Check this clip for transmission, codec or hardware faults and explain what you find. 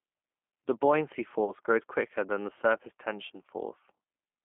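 Two faults are present: a low-rate speech codec across the whole recording and one concealed dropout.

G.729 codec, throughout: the speech is rebuilt from a vocal tract filter, a pitch predictor and a few pulses per frame, which fits an 8 kbit/s stream. The band runs from about 200 Hz to 3.4 kHz, and the voice sounds clearly rough and synthetic.

VoIP packet loss concealed by the speech codec, 1.45 to 1.52 s, just before "grows quicker than the": about 30 ms of audio went missing, which fits a single lost packet. The decoder stretches its last pitch and filter into a buzzy tone or coloured noise that fades, and the speech stays weak briefly afterwards.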